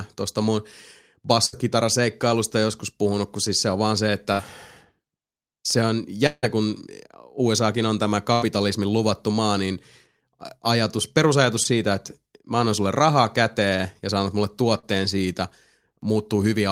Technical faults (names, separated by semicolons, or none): burst of packet loss; long network dropout; short concealed packet loss